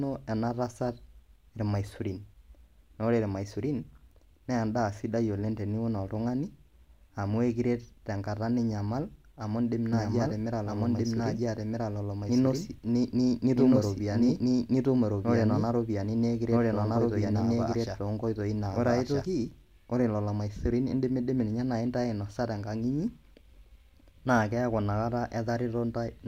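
A doubled audio track runs from 9.93 to 19.25 s: a second, full-band copy of the speech trails about a second and a half behind, at roughly equal loudness, with no decay or room colour. It cuts in and out abruptly, likely from a slower second capture path.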